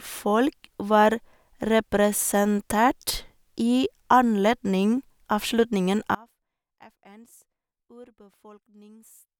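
A speech recording that suffers an audio dropout to a faint residue at 6.15 s, just after "i anledning avslutningen", and never recovers before the end. The voice cuts off abruptly rather than trailing away, leaving only a faint trace of sound roughly 30 dB below the normal level. The likely cause is the signal feed being lost while the downstream path stayed live. On a waveform the envelope collapses to a thin sliver at that instant, and a spectrogram shows the speech harmonics ending on a sharp vertical edge, with only a dim wash beyond it.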